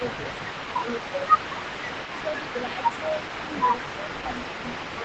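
A faint, delayed second copy of the speech runs through the whole recording, trailing the talker by about 369 ms and sitting roughly 10 dB below it. This echo leak is likely a loudspeaker-side echo canceller letting part of its microphone pickup return into the call.

Against that backdrop the talker's level dips in short patches at 0.79–0.86 s, 1.46–1.58 s, 2.26–2.32 s, 2.63–2.81 s and 4.98–5.04 s, mostly by around 10 dB and only slightly at 2.26 s. This is likely speech suppressed in double talk: the canceller, unable to separate local speech from echo, attenuated both, within audio band-limited to 8 kHz.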